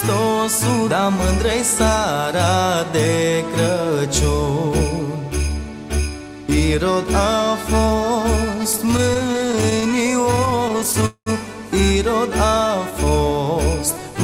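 Between 8.63 and 11.05 s the audio shows repeated stalls (stutter): 34 brief gaps, none longer than about 18 ms, together adding roughly 0.34 s, about 14% of that stretch. Packets arriving late kept draining the jitter buffer, and each gap was filled by extending the preceding sound, so nothing is lost but the passage drags and judders. Immediately after, from 11.06 to 11.29 s, a call audio freeze holds the sound for about 0.2 s: the last sound is stretched into a fading buzz or hiss that ends in about 90 ms of silence before playback resumes where it stopped. The likely cause is a single longer hold-up in packet delivery that emptied the buffer. From 12.48 to 13.11 s a jitter buffer slow-down stretches the audio by 74 ms, playing it at about 90% speed with pitch unchanged, as the receiver repeats short segments to rebuild its reserve.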